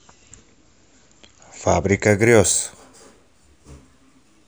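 From 2.08 s, imaging from linear upsampling, fitting a 16 kHz source, mirrors content faintly into 8 to 16 kHz: a reflected spectrogram band, heard as sibilant shimmer.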